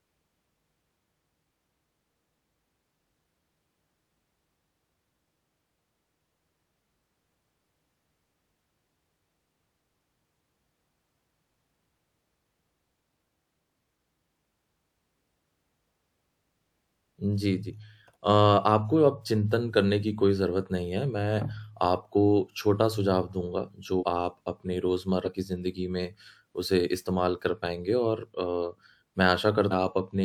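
At 23.99 s, 25.24 s and 29.70 s the speech jumps ahead where compressed frames were skipped, losing about a tenth of a second, then half that, then about 0.7 s. These jumps fit a 46.4 ms frame. Each join shows as an abrupt waveform seam and a spectrogram discontinuity.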